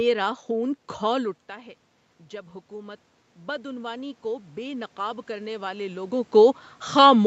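Automatic gain rising runs from 2.3 to 6.24 s. After the input falls by about 13 dB, the gain control treats the signal as too quiet and slowly lifts its gain by about 8 dB, so the speech and the room noise swell together.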